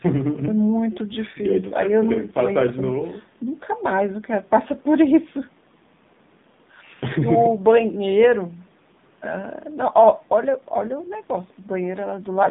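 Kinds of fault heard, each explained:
AMR narrowband mobile codec: The speech went through a 2G/3G-style mobile speech coder that samples at 8 kHz and rebuilds the voice from a vocal-tract model excited by sparse pulses every few milliseconds. The line passes only about 150 Hz to 3.7 kHz, so the speech loses its low body and all its upper air and sibilant detail. The coding damage is plainly audible as a buzzy, synthetic edge, consistent with a low mode around 7.4 kbps.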